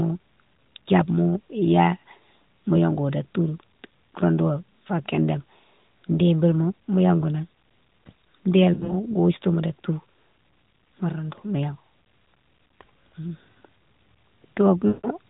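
Speech over an AMR narrowband mobile link, band-limited below 4 kHz with light codec coloring that fits the 12.2 kbps mode, shows lost AMR speech frames twice. From 8.74 to 8.94 s, about 100 ms of scattered losses (longest run 60 ms) cause brief dips and warbles. From 14.88 to 15.07 s, a 160 ms run makes the sound smear out and fade toward silence. Unlike hard dropouts or clicks, the decoder stretches the last pitch with falling gain.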